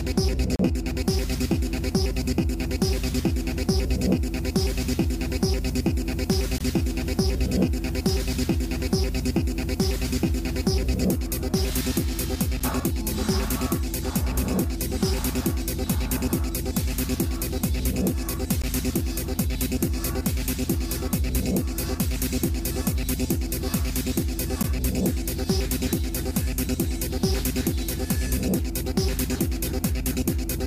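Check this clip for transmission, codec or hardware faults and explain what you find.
The stream has gaps between stream segments. The segments are about 6 s long, and at several boundaries the time stamps of one segment end short of where the next begins. The player fills each hole with silence, so the sound drops out abruptly with hard edges. Nothing is lost, but the timeline is stretched by each insertion. The drops occur at 0.56 to 0.59 s (about 33 ms), 6.58 to 6.61 s (about 22 ms), 12.60 s, 18.62 s and 24.63 s.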